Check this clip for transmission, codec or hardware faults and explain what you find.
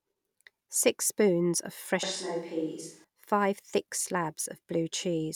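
One hardware-type fault is present in this speech clip. From 2.03 to 3.04 s, between "spoons of" and "five thick", the sound abruptly turns roomy and hollow, thinner in the bass, roughly 5 dB quieter, with room noise rising to around 35 dB below the speech. This points to a switch to a distant microphone, likely because the close microphone's feed dropped and a farther pickup filled in before the close signal returned.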